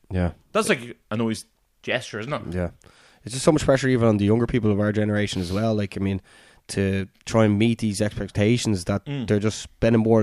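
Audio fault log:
No technical faults are present in this speech recording, and the signal holds steady, continuous level and intact bandwidth throughout.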